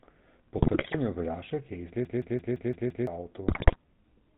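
Throughout the clip the speech carries the sound of the GSM full-rate codec at 13 kbps. The vocal tract is modelled as a filter excited by a sparse, regular pulse train, and nothing above 4 kHz survives. The result here is a plainly audible buzzy, gravelly roughness over the whole voice, with a dull, band-limited top end.

From 0.58 to 0.95 s, GSM bit errors break into the decoder. Corrupted filter, pitch and gain parameters distort the spectrum frame by frame, so the speech turns into squawks, pops and gargling for that stretch. The error rate is about 2.7%, which fits damage spread across many consecutive frames. A second, denser burst from 3.48 to 3.76 s, at about 5.6%, produces the same garbled squawking.

Between 2.05 and 3.07 s, a system hang loop takes over. The host stalled while the audio hardware kept replaying its ring buffer, so a single 170.67 ms chunk repeats exactly six times at 5.86 Hz. 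That interval fits an 8192-sample buffer. It comes across as a mechanical, machine-gun-like stutter of one fragment, and around a second of the real audio is lost.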